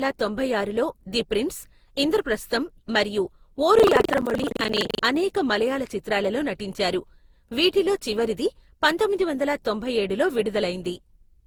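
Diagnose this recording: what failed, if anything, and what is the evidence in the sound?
The codec stage shows generation loss across the whole speech clip. The sound is swirly and hollow, with smeared consonant attacks. The smearing is heavier than one pass at a moderate bitrate would cause. It is likely repeated decoding and re-encoding, consistent with Opus at around 64 kbit/s applied roughly ten times. Each pass quantised on a shifted frame grid, so noise accumulated.

Buffer tearing occurs at the driver or buffer stage from 3.76 to 5.03 s. It starts after "ది ప్రిన్స్ ఇంద్రప్రస్థం మరియు" and clears before "అనేక మలయాళ చిత్రాలలో నటించారు". A robotic buzz at 23.4 Hz rides on the signal, which fits a 2048-sample buffer. The writer and reader pointers crossed inside each period. About a third of each buffer replays audio roughly 150 ms old, with hard joins on both sides. Those joins produce the buzz at the buffer rate.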